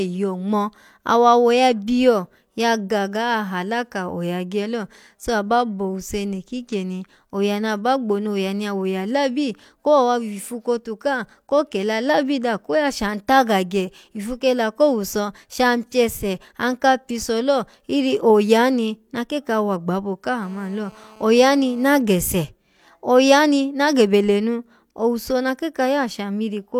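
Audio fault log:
20.43–22.02 s GSM phone buzz: raspy 217 Hz buzz about 26 dB below the speech, as the audio circuit rectifies a nearby 2G phone's call bursts.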